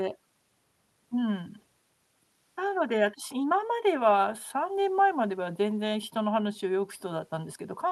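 No technical faults are audible in the speech; it carries the ordinary character of a call codec path, with the top of the band ending near 12 kHz in a way that fits Opus at a moderate bitrate.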